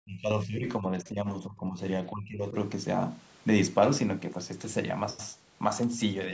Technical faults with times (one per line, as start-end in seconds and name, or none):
0.02-1.82 speech suppressed in double talk
2.11-2.56 speech suppressed in double talk